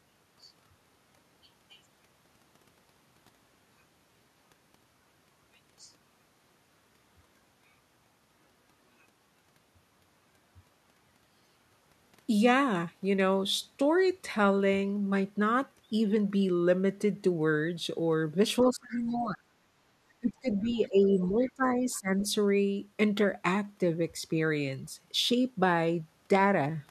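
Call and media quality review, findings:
Other side's voice leaking through: echo canceller likely leaving residual loudspeaker echo in the mic path. Faint second voice, about 20 to 25 dB under the talker, in scraps at 18.62–18.75, 18.91–19.28, 20.49–21.22, 21.4–21.52, 21.91–22.0 and 22.2–22.28 s.

Speech suppressed in double talk: canceller likely misreading both talkers as echo and attenuating the whole signal. Talker's voice dips by about 25 dB across 18.69–19.47 s and by about 20 dB across 20.2–22.24 s, roughly 1.7 s of speech pushed down while the far end talks.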